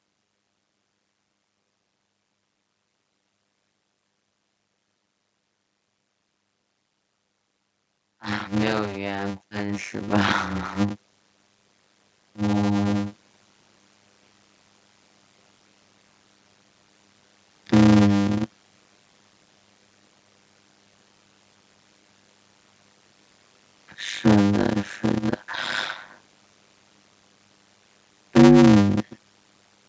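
Throughout the speech there is a block size mismatch with padding. One stage appears to write 256-sample blocks into a larger block that the next stage reads, and zeros fill the remainder. That puts a short silence in every block, which is heard as a steady 100 Hz buzz. The speech runs at 0.533 of its proper speed while its pitch stays about normal. That fits a 480-sample read block at 48 kHz. A sample-rate mismatch would also slow the audio but would lower the pitch with it, and here the pitch holds.

From 8.48 to 11.08 s the automatic gain control rises by about 10 dB, and from 12.35 to 13.22 s it rises again by about 4 dB. In both cases the control judged the input too quiet and raised its gain step by step. The voice and the background noise swell together, so this is a gain change and not a speaker raising their voice, which would leave the background level unchanged. The first rise is longer and deeper, and the second is shorter and gentler. 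The call microphone processing can be heard limiting the band, with nothing above 8 kHz.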